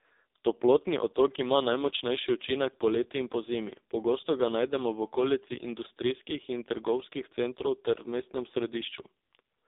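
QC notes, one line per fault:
Throughout: AMR narrowband mobile codec. The speech sits in a phone-line band of roughly 300 Hz to 3.7 kHz with nothing above, and it's heavily buzzy and synthetic, which fits a low mode around 5.15 kbps, where a handful of pulses per subframe drive the vocal-tract model.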